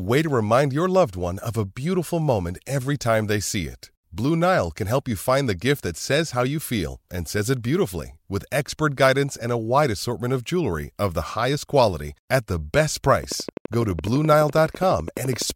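After "quality at the best", a train of clicks runs 13.24–15.51 s: regular ticks at 11.9 per second, likely interference, showing as vertical spikes.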